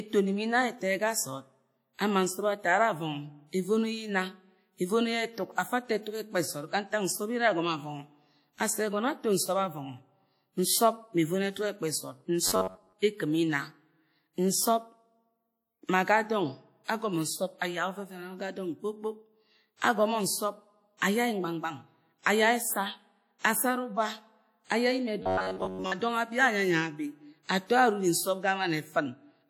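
A ringing, washy quality runs through the whole speech clip, with hiss that breathes with the signal. It is plainly audible and likely WMA compression, consistent with a 48 kbps encode.

From 12.47 to 12.93 s a rigid metallic buzz at 93.8 Hz sets in. This is robotic sound from repeated short buffers: roughly 70 percent of the sound is replaced by repeats of a fragment of about 10.7 ms, the likely cause.

Pre-echo appears at 19.80 s, from 20.97 to 21.02 s and from 23.39 to 23.44 s. Codec noise spreads 19, 46 and 58 ms ahead of sharp attacks, softening them.

The same 93.8 Hz robotic buzz returns from 25.23 to 25.92 s, just before "dong abi".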